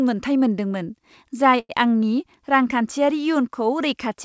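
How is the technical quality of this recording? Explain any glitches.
One glitch stands out: a short stall from a late packet, from 1.60 to 1.72 s. A packet arrived late and the jitter buffer ran empty, so the receiver stretched the last sound by 92 ms, then resumed where it left off. Nothing is lost, but one sound is held too long, with a slight buzz or dip. Throughout, nothing is heard above 8 kHz, which fits a wideband call codec such as G.722.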